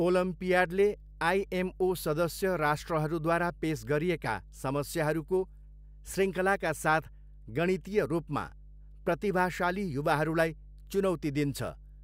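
Mains hum runs through the whole speech clip: a steady 50 Hz tone from power-line coupling, likely a ground loop, sitting roughly 20 dB below the voice.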